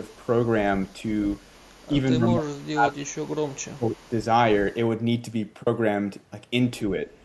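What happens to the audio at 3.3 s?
At 3.3 s the speech is caught in a speech-suppressed-in-double-talk stretch running from 1.91 to 4.1 s. It dips by as much as about 30 dB, likely because an echo canceller mistook overlapping talk for echo. Under it, an echo leak from 3.17 to 4.09 s adds a faint copy of the voice played on the loudspeaker, trailing by 208 ms, well below the direct sound, likely from loudspeaker pickup that the canceller didn't fully remove.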